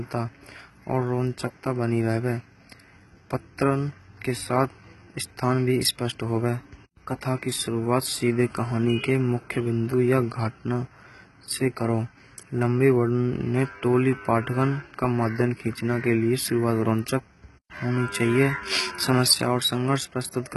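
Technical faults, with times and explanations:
Throughout, HE-AAC compression, likely the cause of the heavy damage audible across this speech: the treble sounds bright yet false, with s sounds gritty, metallic and lispy, which fits a very low bitrate around 16 kbps. Only the lower band is truly coded; the upper part is rebuilt by copying lower bands upward under a coarse envelope, so harmonics misalign above the crossover. A spectrogram shows repeated, smeared-looking treble patches and nothing at all above 11.8 kHz.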